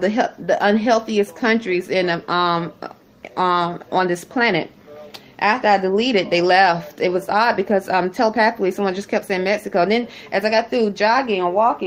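No technical faults can be heard anywhere in the recording; the signal stays continuous and steady throughout.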